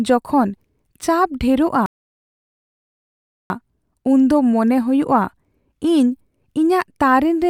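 At 1.86 s the speech cuts out in mid-flow and the output drops to silence until 3.50 s, a gap of about 1.64 s. This is a playback stall. The likely cause is the player running short of buffered data, or its audio thread being blocked, so that nothing was delivered to the output until it recovered. The silence is abrupt at both edges and clearly too long to be a natural pause.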